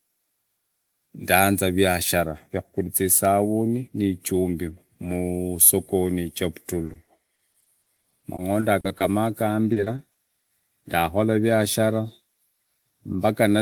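From 6.87 to 9.02 s the speech shows repeated packet loss (robotic sound): a rapid run of short dropouts, none longer than about 40 ms, each patched by stretching the preceding sound, with concealment covering nearly a fifth of the stretch. The result is choppy speech with pieces missing. A shorter burst of the same fault follows from 9.72 to 10.16 s, with a handful of gaps up to 40 ms, concealing roughly a quarter of that span.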